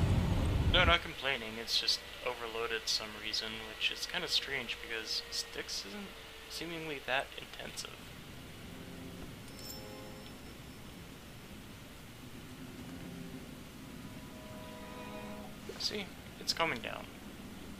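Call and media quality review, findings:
No faults found; nothing to flag for this audio.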